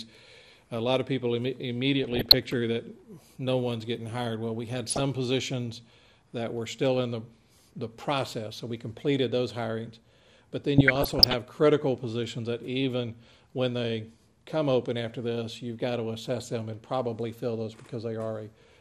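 Throughout, the sound is dull and carries a gurgling, granular roughness as upper bands flicker in and out, the plainly audible character of MP2 compression. It likely comes from a bit budget around 80 kbps, too small to keep the top sub-bands active, so the remaining bands are coarsely quantised.

Short blips of noise break out from 1.98 to 2.34 s, 4.86 to 5.0 s, and 10.78 to 11.34 s. This is DAB burbling. Weak reception let a fraction of a percent of bit errors through, corrupting samples so single sub-bands carry short blips of noise.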